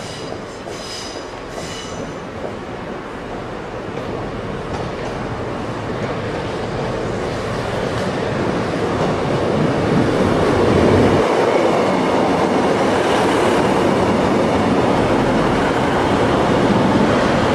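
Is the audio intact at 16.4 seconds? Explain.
Yes, the audio is intact at 16.4 seconds, with no dropout, click, distortion or other fault at that moment.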